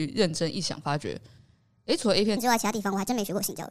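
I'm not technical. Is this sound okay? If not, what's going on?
No. From 2.37 s to the end at 3.70 s there is a wrong sample rate: speech runs about 1.38 times too fast and sounds higher-pitched. Pitch rising along with speed sets this apart from simple fast-forwarding.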